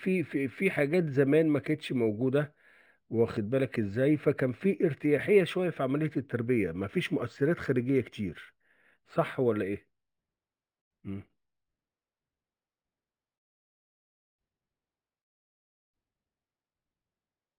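Speech with imaging from linear upsampling throughout: the top dulls near 6 kHz, then a faint mirrored copy sits between 6 and 12 kHz, roughly 35 dB down, visible on a spectrogram and heard as metallic shimmer on sibilants, pointing to a 12 kHz source.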